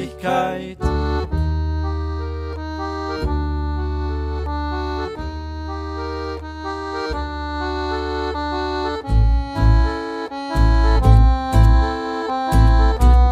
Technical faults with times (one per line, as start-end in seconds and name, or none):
none